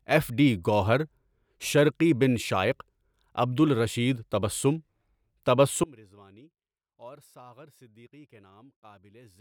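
At 5.84 s the speech drops away abruptly and never returns, leaving only a faint residue of the signal, roughly 25 dB below its normal level, through to the end of the clip. This is an audio dropout to a faint residue: the cut is sudden, not a fade or natural pause, and the path stays live afterwards. The likely cause is the wanted feed being lost upstream while a weak leak of it continued through.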